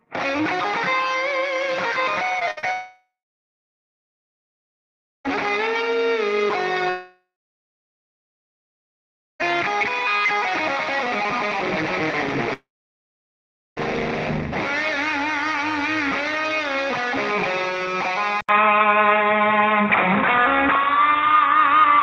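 Throughout the recording, the sound was split into windowed frames and rebuilt with an overlap that does not add up to a steady gain, causing overlap-add ripple. The level swells and dips by about 6 dB at a rapid rate, around 200 times a second, so the everyday sounds carry a metallic buzz with extra tones around each note.

From 2.39 to 2.65 s, packets were repeatedly lost. Three short gaps (the longest 58 ms) were each patched by extending the previous sound, covering about 44% of that span. These are repeated packet losses, and they produce a choppy, robotic texture with small pieces missing.

Three much longer breaks follow, at 2.73 to 5.26 s, 6.90 to 9.41 s and 12.53 to 13.78 s. Each is likely a long network dropout in which nothing arrived. A fading buzz or hiss carries the last sound briefly, then silence holds for about 2.2, 2.1 and 1.1 s before the audio resumes with that stretch gone.

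At 18.41 s the input was likely switched to a poorer device, which lasts to the end. An 80 ms silence marks the change. Afterwards the band is narrower, the level shifts by about 5 dB, and a new noise floor sits roughly 30 dB down, making the sound dull and boxy.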